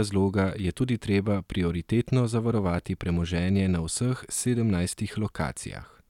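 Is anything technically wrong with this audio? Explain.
No, nothing technically wrong can be heard in this speech recording. There is no technical fault to point to anywhere in it.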